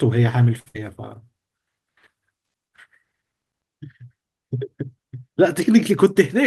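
At 0.59 s a short stall from a late packet begins. The packet missed its playout time, the jitter buffer ran dry, and the receiver held the preceding speech for about 67 ms before resuming from the same point. The stall stretches a sound rather than losing any, and the event spans to 0.80 s.

Inside that stretch, from 0.68 to 0.76 s, a burst of packet loss occurs. About 60 ms of speech never arrived in time. Concealment carried the last sound forward for roughly 62 ms, fading it down, and playback then jumps ahead with that section gone.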